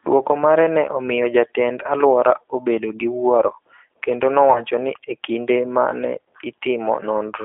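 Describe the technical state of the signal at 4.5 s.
At 4.52 s the speech drops out and the decoder covers the gap. This is VoIP packet loss concealed by the speech codec, running to 4.64 s. About 30 ms of audio went missing, which fits a single lost packet. The decoder repeats its last pitch and filter at falling gain. The result is a brief buzzy tone or coloured noise that fades. The voice then sounds weak for a moment after audio resumes.

Underneath, the whole clip passes through the G.729 codec at 8 kbit/s. Only roughly 300 Hz to 3.5 kHz survives. The speech is rebuilt from a filter, pitch predictor and sparse pulses. So it sounds plainly rough and synthetic.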